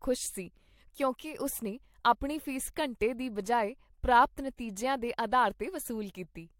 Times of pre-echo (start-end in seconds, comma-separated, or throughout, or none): 3.00